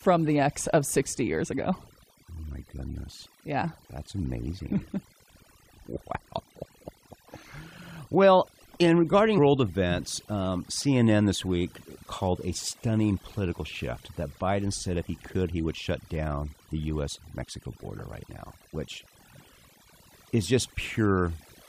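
Throughout the speech, overdone noise removal is audible: the suppressor cuts individual frequency bands whenever they sit near its noise estimate, taking the quieter parts of the voice with them. The background drops and breaks up into twinkling specks, unlike a simple low-pass filter, which would dull the sound evenly without that flickering residue.

From 9.37 to 9.39 s, just before "events um", damaged data in a compressed stream produces a brief glitch. The decoder misreads the corrupted frames and resyncs on the next header. Unlike a plain dropout, which is just silence, this comes from the decoder losing sync.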